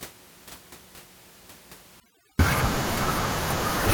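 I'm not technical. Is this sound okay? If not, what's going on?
No. From 2.0 s to the end there is overdone noise removal: a cleanup filter set too strong shuts off frequency bands it mistakes for background hiss, so the quieter parts of the voice vanish too, leaving twinkling in the gaps.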